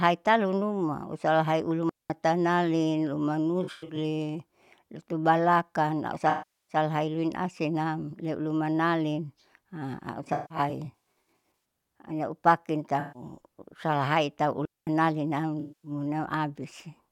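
At 1.89 s the speech drops into a clean hole of near silence for about 0.21 s, ending at 2.10 s, with no noise burst on either side. The same happens from 14.65 to 14.87 s. This is a digital wireless dropout: the radio link lost too much data, so the receiver muted with a very fast fade instead of passing damaged audio.

Elsewhere the sound smears and turns phasey or noisy. At 3.63 s about 0.21 s of audio is lost across a 0.34 s stretch ending at 3.96 s, with the longest gap around a tenth of a second. Then 6.30 to 6.76 s has a 0.38 s loss. The worst is 10.23 to 11.60 s, where about 0.79 s is lost piecemeal over 1.45 s, with runs up to around 0.15 s. Shorter patches follow at 13.00 to 13.22 s and 15.60 to 15.91 s. This is AAC frame loss with concealment: the decoder fills missing frames from the last good spectrum, which produces the blurred texture.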